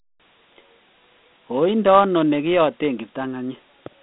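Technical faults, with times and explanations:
Throughout, Dialogic VOX ADPCM: the speech sits in a narrow band from 150 Hz to 3.6 kHz, with nothing above 3.8 kHz, and a gritty hiss trails it. Coarse 4-bit adaptive steps, fitting roughly 32 kbps, leave plainly audible quantisation noise.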